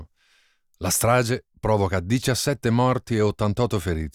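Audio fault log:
Nothing to log here, since the speech comes across without any technical faults at all.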